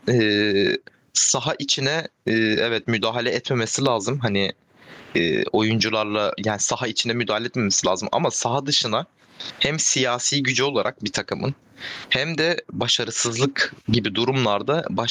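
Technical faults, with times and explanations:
Throughout, gain pumping: the level swings by some 25 dB, squashing loud and soft together. Likely a fast limiter fighting excessive gain.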